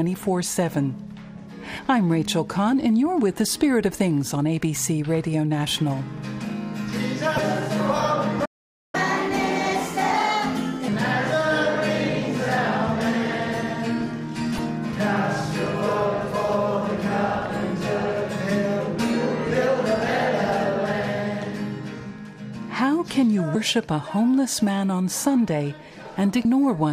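Playback stall, 8.45 to 8.95 s: the sound cuts out for about 0.48 s, most likely because the player ran short of data, then resumes.

Catch-up at higher speed, 8.95 to 10.88 s: the backlog plays at 1.25 times normal speed, pitch raised about four semitones, before returning to normal rate.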